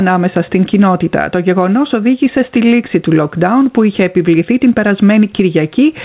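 Gain pumping runs through the whole clip, most likely from input gain set far too high with a fast limiter pulling the level down on each loud sound. The background swells in the gaps and ducks by roughly 10 dB under every peak, leaving the audio squashed and breathing, over a band that stops near 4 kHz, as a G.711 call path would.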